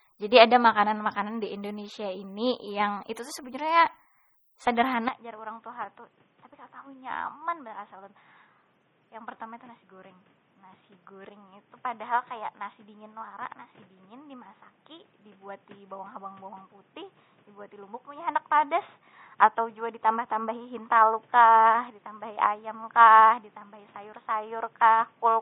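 From the start the speech carries heavy MP3 compression damage, likely from encoding at a low bitrate around 32 kbps. The encoder runs short of bits and drops weak frequency lines that flicker in and out frame by frame, giving a watery, swirly texture, metallic chirps on s sounds and smeared consonant onsets. Unlike a band-limited device, the damage here is not a clean loss of treble but a constant unsteady churning, present from beginning to end.

At 5.08 s the sound abruptly turns dull and boxy and stays that way to the end: the input has switched to a poorer device, likely a different microphone or a headset's call profile. Everything above 3.8 kHz vanishes, the level drops by about 10 dB, and a faint new background noise appears well below the speech. There is no gap at the switch. What separates this from the compression is that it happens at a single moment and produces a fixed, steady narrowing rather than swirling.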